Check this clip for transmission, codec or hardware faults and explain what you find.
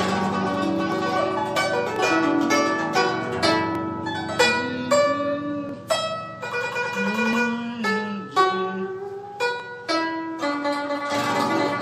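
Six isolated clicks are the only fault heard in the clip, at 0.92, 1.96, 3.75, 5.69, 7.33 and 9.60 s. Each is a single sharp tick that shows as a thin vertical line across the spectrum. The likely cause is dropped samples: well under a millisecond of audio goes missing, so the waveform jumps straight to a later value. That step discontinuity produces the click, and the gap is far too short to remove any audible sound.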